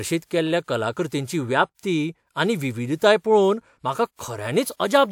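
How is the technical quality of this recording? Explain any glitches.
The recording shows one recurring fault, pre-echo, at 0.63, 1.08, 1.75, 3.19 and 4.16 s. At each of these the attack is preceded by a short hiss lasting 33 to 50 ms, so onsets sound softened. The transform codec spreads quantisation noise across its whole block, and noise meant for the loud attack also fills the quiet moment just before it.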